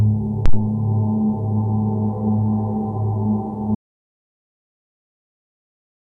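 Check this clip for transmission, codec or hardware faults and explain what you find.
Two faults are present, one at the start and one that runs to the end.

Phantom power thump, 0.46 to 0.62 s: a supply was switched on a live input, and the sudden voltage step passed through the coupling capacitors into the signal. It lands as a deep low-frequency thud with a quick decay of about 36 ms.

Audio dropout to silence, from 3.75 s to the end: the sound cuts off abruptly and is replaced by silence, with no room tone or noise floor left. The input was likely lost through a disconnection, a failed link or a mute while recording continued.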